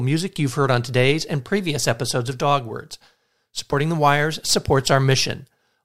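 Sample clock jitter from 2.71 s to the end: an unstable converter clock mistimes samples by a few microseconds, adding a faint roughness around 30 dB below the speech.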